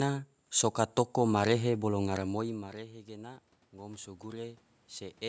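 After "soka toko marehe bolo", around 2 s the talker's level at the microphone drops by about 19 dB. From 2.09 s to 4.58 s, automatic gain rising follows: the gain control sees the much quieter input and slowly raises its gain by about 6 dB over roughly two and a half seconds. Voice and room noise swell together through that span, so the background audibly climbs with the speech, which still sits well below its earlier level.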